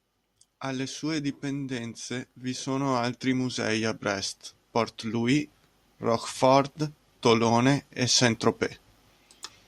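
Automatic gain rising from 0.64 to 4.36 s lifts this speech recording by about 8 dB, and again from 6.03 to 8.45 s by about 4 dB. The gain control judged the input too quiet and ramped up, so voice and background swell together.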